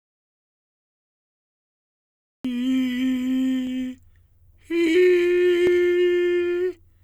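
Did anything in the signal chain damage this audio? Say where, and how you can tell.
Yes: an audio dropout to silence, likely a lost input link upstream, leaves silence with no room tone from the start until the music appears at 2.45 s.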